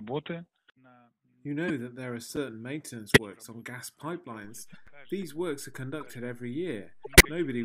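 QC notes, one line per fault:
1.68–1.70 s, 3.07–3.18 s, 4.61–4.76 s, 6.01–6.13 s, 7.04–7.25 s: corrupt frame decoded. Each event spans several damaged compressed frames that were decoded anyway. Misread gains and codes place energy at wrong frequencies, heard as a chirp, squeak, blip or noise burst. The error is loudest at 3.07 s and 7.04 s and quietest at 4.61 s.
2.36 s and 4.87 s: gap between chunks. A hole of about 7 ms opens at each join. The two holes are about 2.5 s apart, which fits playback in 2.5-second chunks with silence, from padding or late chunk starts, inserted between them. No material is lost, but the sound is interrupted at each join.
4.44 s: DC step. The waveform's zero line jumps here and the offset holds to the end of the clip, which suggests a converter recalibrating or an offset input being switched in. The jump is heard as a single low thump or click, while the sound itself carries on unchanged.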